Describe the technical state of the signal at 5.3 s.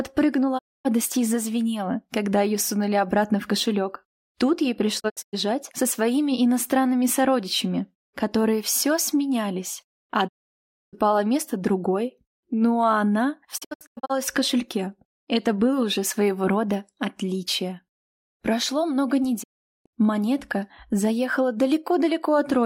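At 5.3 s you're inside a digital broadcast dropout running from about 4.99 to 5.35 s. The receiver lost good frames and muted, so the sound fades out over 20 ms and drops into short silent holes totalling 192 ms, the longest 96 ms. The programme comes back after that.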